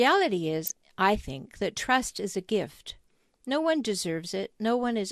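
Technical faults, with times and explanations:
Throughout: MP2 compression. The speech sounds dull and gurgly, with upper sub-bands dropping out and coarse quantisation, likely from MP2 coding at a low rate fitting about 80 kbps.
0.63–0.89 s: DAB burbling. Uncorrected bit errors corrupt sub-band samples frame by frame, so short blips of noise appear in single sub-bands, giving a burst of burbling.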